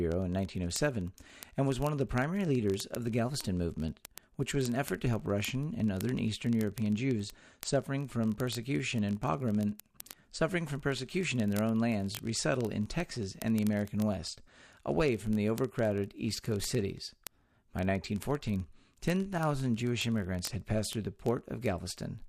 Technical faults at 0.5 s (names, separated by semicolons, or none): word clock ticks